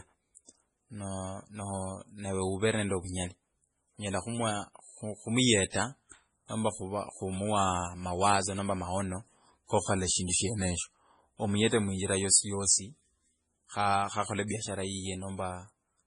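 MP3 compression runs through the whole speech clip: nothing is left above 10.5 kHz, and the remaining band has a watery, swirling texture with metallic chirps on s sounds. This is likely heavy MP3 encoding at a very low bitrate, around 24 kbps by the sound of it. Starved of bits, the encoder cuts the treble at a fixed point and zeroes quieter frequency lines, which flicker on and off between frames.

Pre-echo appears twice, from 0.35 to 0.37 s and from 5.70 to 5.74 s. A short hiss runs ahead of each sharp onset, spread over 23 ms in the first case and 38 ms in the second, and both attacks sound blunted. The codec sizes its quantisation noise for the loud part of a block and spreads it over the whole block, so the quiet moment before the attack is filled with noise too.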